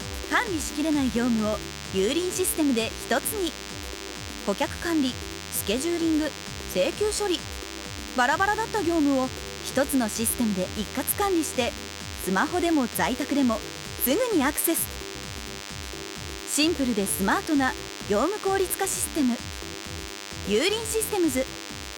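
A DECT cordless phone buzz runs through the whole clip, a thin, rasping tone pulsed 100 times per second and sitting roughly 10 dB below the sound. Unlike smooth mains hum, it is buzzy and rich in high harmonics, from a nearby handset's radio bursts being rectified.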